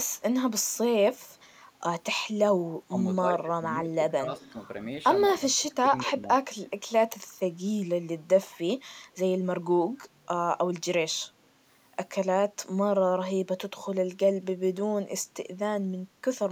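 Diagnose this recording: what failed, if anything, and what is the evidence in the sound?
Speech suppressed in double talk, at the call-processing stage: the speech level is pulled down at 2.66–2.98, 3.18–3.65, 3.84–3.96, 4.14–4.56 and 5.38–6.28 s. The first dip is deepest, about 30 dB. The dips at 3.18 and 5.38 s reach about 20 dB, and the others only about 10 dB. The likely cause is an echo canceller that could not tell this talker from loudspeaker echo while both ends spoke, and so attenuated everything.

Echo leak, also in call processing: at 4.38–4.52 s a faint delayed copy of the speech sits about 30 dB below the direct sound, arriving 231 ms late. This is likely residual loudspeaker pickup that the far end's echo canceller failed to remove and sent back. A single discrete repeat at a fixed delay, briefly present, distinguishes it from room reverberation, which would trail off continuously rather than return as a separate copy.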